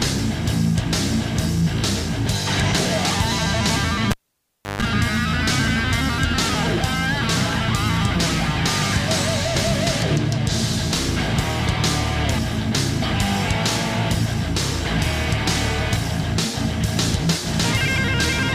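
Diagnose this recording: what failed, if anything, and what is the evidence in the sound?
Analogue wiring: a cable pulled and plugged in. A pop at 4.11 s, about 0.66 s of near silence, a 0.15 s 50 Hz mains buzz, then a pop at 4.82 s. The buzz rules out a digital dropout.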